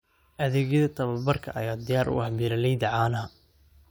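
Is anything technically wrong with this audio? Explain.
No, nothing is technically wrong with this audio.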